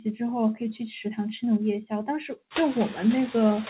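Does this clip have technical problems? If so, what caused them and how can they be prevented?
Yes. A noise suppressor runs throughout, cutting each frequency band it judges to be steady noise by only about 3 dB, frame by frame. When the room noise rises sharply around 2.5 s, the leftover noise dips between phrases and swells under speech. Reducing the room noise at the microphone, so the suppressor has less to remove, prevents it.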